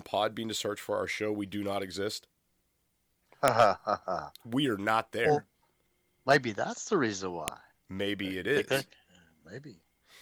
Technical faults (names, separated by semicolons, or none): file header played as audio